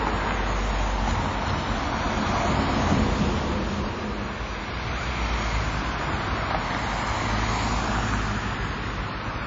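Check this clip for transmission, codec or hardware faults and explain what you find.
One fault runs through the whole clip: plainly audible WMA compression damage. Nothing survives above 7.6 kHz, and there's a ringing, washy hiss pumping with the signal, likely from a low-bitrate transform encoder, fitting roughly 32 kbps.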